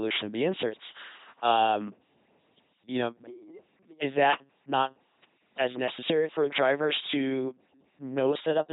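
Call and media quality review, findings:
LPC-10 vocoder, full clip. Speech buzzy, mechanical, robot-like; heavy damage. Nothing above 3.9 kHz. Sound points to a 2.4 kbit/s LPC-10 path. Each frame is resynthesised from a ten-pole vocal tract filter fed by a pulse train or noise. The binary voiced/unvoiced choice discards natural excitation, leaving the synthetic buzz.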